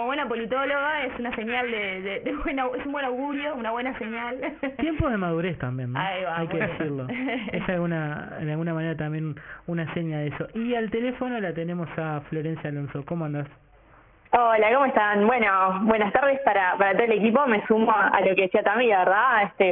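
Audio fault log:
Throughout, aliasing: everything above 3 kHz has folded back down into the band below it, so high-frequency content returns as gritty, metallic tones at unrelated pitches, roughly 15 dB under the wanted sound. The 3 kHz fold points to the rate being lowered to 6 kHz without an anti-alias filter first. On a spectrogram, energy runs hard up to a sharp ceiling at 3 kHz, with mirrored, downward-sloping traces where rising components should be.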